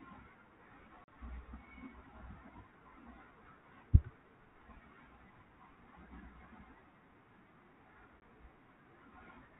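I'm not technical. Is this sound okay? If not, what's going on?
No. At 1.04 s there is a gap of about 40 ms, and at 8.2 s a shorter one of 20 ms. Both are a sudden hole of silence, which fits a couple of lost packets and then one. This is packet loss on an ADPCM call. Unlike a simple dropout, the speech doesn't come back cleanly. The phone's decoder has lost track of the sender, so the sound returns with a little distortion, then settles within a fraction of a second.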